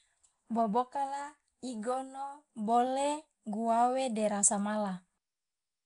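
A short speech recording with Nellymoser compression damage running through the whole thing. There's a rough, hissy halo and a smeared, underwater feel, and nothing above about 10.7 kHz, which fits the old Flash microphone codec running at around 44 kbps, likely the cause here.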